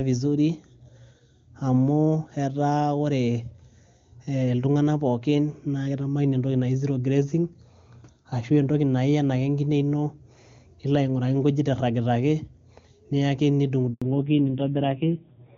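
At 13.94 s there's a handover gap. The call jumps between networks and no speech frames get through for about 80 ms, until 14.02 s. The speech drops out abruptly and whatever was said in that stretch is simply gone.

Right after, from 14.02 s to the end, you get a fallback to narrowband. Nothing survives above 4 kHz, so the speech turns muffled and gritty compared with the crisp HD Voice before it, which fits a drop from AMR-WB near 23.85 kbit/s to AMR-NB around 5.9 kbit/s.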